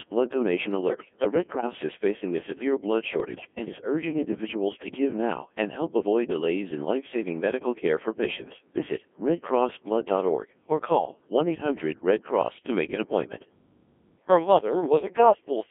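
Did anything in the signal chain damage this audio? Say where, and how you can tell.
Yes. The codec stage is the main culprit: the whole clip has been through a Codec 2 vocoder. The speech has that robotic, buzzy quality you get when the decoder rebuilds a voice from sine waves using only pitch, voicing, energy and a spectral envelope, so the original waveform is gone. It's squeezed into roughly 250 Hz to 3.4 kHz, and the damage is heavy throughout, which fits the 1.6 kbit/s mode.

The second problem is on the radio link: bit errors on digital voice radio in two bursts. The first runs from 0.88 to 1.67 s, right after "blood donation" and before "is facing a severe". The second is shorter, from 3.2 to 3.47 s, between "facing a severe blood" and "and is urging individuals". In both, the synthetic voice lurches in pitch, level and tone colour and breaks into warbly gibberish. At a few percent error rate, corrupted bits wreck whole frames' parameters at that low bitrate.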